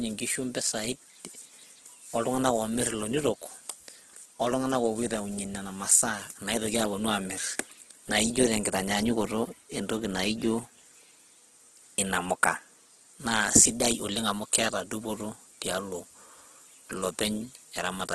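Throughout the speech, the sound is rough and grainy, with nothing above 12.4 kHz. This is likely heavy Opus compression at a low rate near 12 kbps, where empty bands are filled with noise. That leaves a gritty texture rather than MP3's swirling, watery holes.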